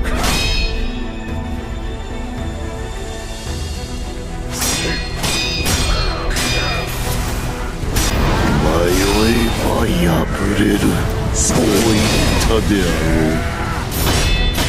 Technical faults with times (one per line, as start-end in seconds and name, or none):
13.56 dropped buffer (overrun)